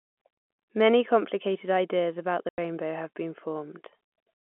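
A speech recording at telephone bandwidth (roughly 200 Hz to 3.4 kHz, typical of G.711 telephone coding) drops into a hard-edged 90 ms hole from 2.49 to 2.58 s, right after "complicated ideas about the" and before "have been". This is packet loss filled with silence, consistent with three 30 ms packets lost and replaced by nothing.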